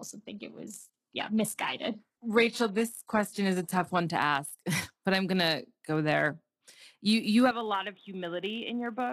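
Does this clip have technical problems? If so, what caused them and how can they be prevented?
Yes. A block size mismatch (truncated) runs throughout. A steady buzz near 92 Hz marks the block rate. The speed stays essentially normal, so only a little of each block is lost. Match the block sizes between processing stages.

From 0.0 to 4.0 s, until "to ask", the sound is dull, with stronger codec artefacts. Then it clears suddenly without a gap. This is an adaptive stream starting at a low bitrate, which fits a start near 16 kbit/s HE-AAC. Start playback on a higher-bitrate version, or buffer briefly first.

From 7.51 s, right after "you you", the sound turns boxy. The level falls by about 5 dB, and new background noise appears. There is no silence at the switch. The likely cause is the input switched to a poorer device. Lock the input device for the whole recording.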